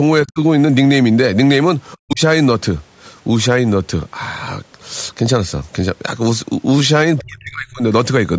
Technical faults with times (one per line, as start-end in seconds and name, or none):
0.24-0.39 speech suppressed in double talk
1.93-1.97 other side's voice leaking through
2.00-2.21 speech suppressed in double talk
7.19-7.82 speech suppressed in double talk